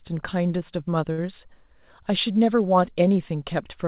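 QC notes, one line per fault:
1.12–1.20 s, short stall from a late packet: a packet arrived late and the jitter buffer ran dry, so the receiver stretched the preceding sound for about 56 ms before resuming where it left off. Nothing is lost, but the sound is held unnaturally long with a faint buzzy dip, and everything after runs 56 ms later. The narrowband call path, with nothing above 4 kHz, fits a 64 kbps G.711 link.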